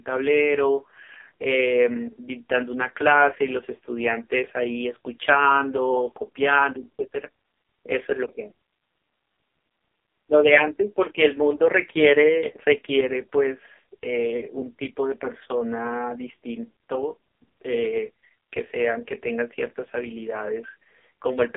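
Speech runs through an AMR narrowband mobile codec for its whole length. It is squeezed into a 300 Hz to 3.5 kHz phone band, so the spectrogram is empty above 3.5 kHz. Heavy buzzy, synthetic coding damage fits AMR-NB's lowest 4.75 kbps mode.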